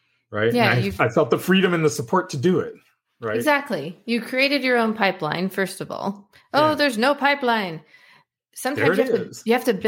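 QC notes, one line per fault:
No fault in this clip.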